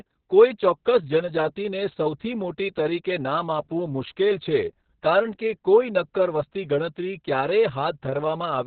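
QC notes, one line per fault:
Throughout: Opus voice compression, heavy. Narrowband SILK coding, consistent with about 6 kbps, leaves speech muffled, hoarse and robotic, and the spectrogram stays empty above 4.5 kHz.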